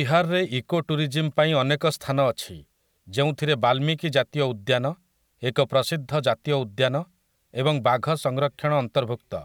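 Nothing technical goes wrong anywhere in this bit of speech, so there's no fault to point to at any moment.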